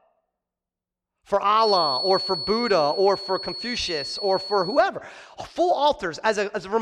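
From 1.53 s to 4.90 s a feedback whistle sits behind the speech: a thin, steady 4.4 kHz tone roughly 10 dB below the voice, slowly swelling and fading in level. Likely cause is a loudspeaker-to-microphone loop held just at the edge of feedback.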